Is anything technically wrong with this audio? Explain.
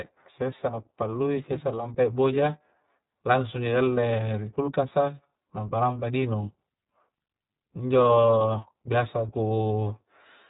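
Yes, two faults are audible.

Throughout the speech there is iLBC codec coloration. The sound is narrowband, with nothing above 4 kHz, and carries a plainly audible rough, slightly synthetic edge. The codec codes each frame's excitation independently, and the character fits its 15.2 kbps, 20 ms mode. This differs from plain low-pass filtering: the harshness and buzz come from the coded excitation, not merely from missing treble.

At 9.80 s there are lost iLBC frames. A brief held, faintly buzzy vowel-like sound lasts about 20 ms, which points to a single lost frame. The decoder filled the gap by repeating the last pitch cycle mixed with noise. Unlike a dropout, there is no silence. Unlike codecs that depend on previous frames, the speech recovers immediately after the gap with no lingering smear.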